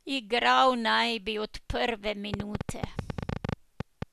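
A burst of sharp ticking and popping cuts in at 2.34 s, right after "naj bi od prve", and runs to 4.03 s. It is a train of clicks, around twenty of them at roughly ten per second, each alike in shape but spaced unevenly, and they stand well clear of the speech, peaking about 15 dB above it. The cause is likely electrical interference from nearby equipment or a faulty connection or power supply injecting repeated pulses into the signal.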